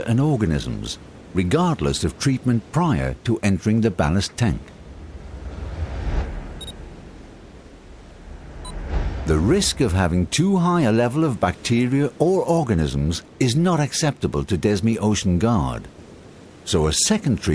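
No technical faults can be heard in this recording.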